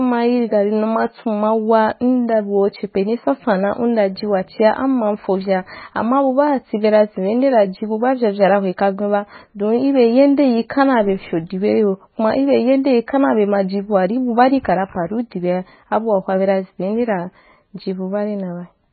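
Speech with MP3 compression damage throughout. Nothing is heard above 4.5 kHz, so the treble is dull. The damage is heavy. Weak detail swirls and turns watery. This is likely a starved MP3 encoder, which fits a bitrate near 16 kbps.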